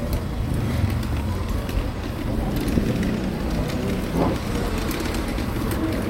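A short recording of sounds has one instance of compressed frames skipped at about 0.82 s. Roughly 70 ms of audio never plays, so the sound leaps forward, which fits around seven lost 10 ms codec frames that were missing or rejected as damaged. On a spectrogram this appears as an abrupt discontinuity in the textures, and on the waveform the envelope steps suddenly.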